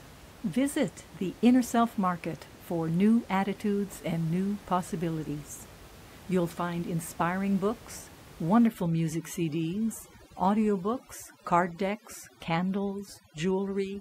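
From 8.67 s, right after "find inspiring books," the room noise, which sat about 22 dB below the voice until then, drops and breaks up into twinkling specks that persist to the end of the clip. This is overdone noise removal: a reducer set far too strong pushes every frequency band close to its noise estimate down or out entirely, stripping quiet voice detail along with the background noise.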